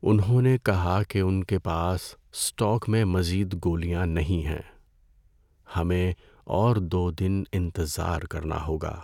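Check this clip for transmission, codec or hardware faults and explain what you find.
No faults found in this speech audio.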